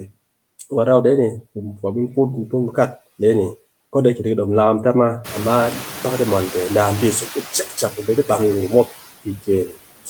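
Noise suppressor artifacts run through the whole recording. Steady background is pulled down by about 18 dB between phrases, leaving a residue that shows as patchy, speckled energy in the spectrogram's quiet gaps.

From 0.00 to 0.11 s the suppressor cuts speech, mistaking the opening for noise and lowering it by up to about 11 dB. The waveform begins with a shrunken onset.

Room noise jumps by about 19 dB near 5 s. Right after "dom lakam ta ma", from 5.24 to 7.44 s, the noise suppressor is catching up. Its estimate takes 2.2 s to adapt, so the noise comes through with only about 7 dB of reduction before sinking. On a spectrogram this appears as a broadband haze that fades gradually.

More speech cuts by the noise suppressor follow: at 8.70 to 8.93 s after "di bam gurum" (about 11 dB), at 9.24 to 9.49 s (about 18 dB), and at 9.66 to 9.78 s (about 13 dB). Each swallows roughly 0.1 to 0.15 s of sound, heard as faint, dulled passages and seen as notches in the waveform envelope with dimmed energy in the spectrogram.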